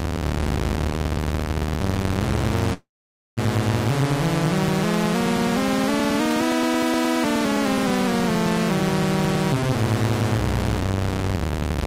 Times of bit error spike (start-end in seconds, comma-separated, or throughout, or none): none